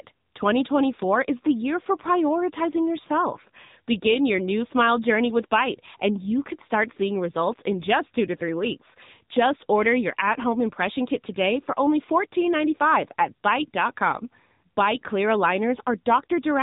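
Speech throughout, carrying AMR narrowband mobile codec damage: buzzy, synthetic voicing fitting a low AMR-NB mode near 8 kbps, and a spectrogram showing nothing above 3.8 kHz.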